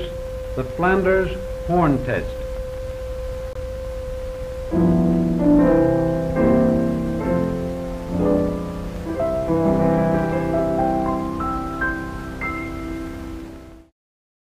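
A gap between stream segments opens from 3.53 to 3.56 s. At the join between two consecutive segments, apparently segments about 4 seconds long, the time stamps leave a short hole, and the player fills it with silence. The sound stops abruptly and resumes just as sharply after about 23 ms, producing a brief hard-edged dropout. Nothing is cut from the audio; it is pushed later by that amount.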